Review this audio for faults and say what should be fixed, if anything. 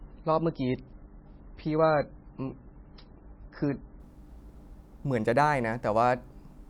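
For the first 4.0 s the speech sounds dull and gritty, with nothing above 5.6 kHz and heavier codec artefacts, then clarity jumps abruptly with no gap. This is an adaptive stream starting at a low bitrate: playback began on a thin rendition, consistent with MP3 near 17 kbit/s, then switched up, sounding closer to 128 kbit/s, once the connection was measured.

To prevent it, start on a mid-level rendition or wait for a throughput estimate before playback.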